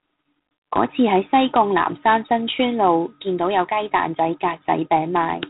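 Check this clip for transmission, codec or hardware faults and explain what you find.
One codec fault runs through the whole clip. G.726 ADPCM: coarse difference coding, which fits 24 kbit/s, leaves a harsh rasping hiss that tracks speech level and stops above 4 kHz, unlike steady background noise.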